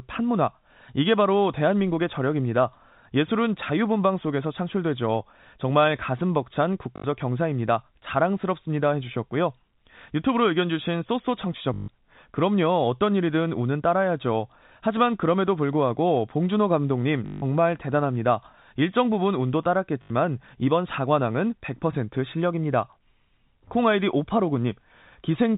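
Short robotic stutters with a 50 Hz buzz at 6.96–7.04 s, 11.74–11.88 s, 17.26–17.42 s and 20.02–20.10 s are packet loss with the last packet repeated, which fits 20 ms packets. All of this sits over the 4 kHz-limited G.711 telephone band.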